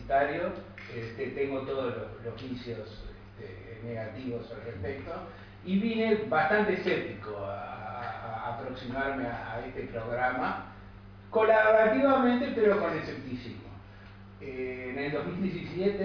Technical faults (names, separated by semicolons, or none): none